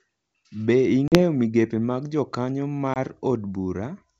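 Hard-edged silences at 1.08–1.20 s and 2.94–2.98 s, then slightly distorted speech that soon settles: packet loss on an ADPCM call knocks the decoder's predictor out of step.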